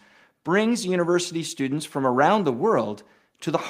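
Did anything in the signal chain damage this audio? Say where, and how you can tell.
No, nothing in the chain audibly damaged this speech; there is no stage to point to and no evidence of a fault at any point in the recording.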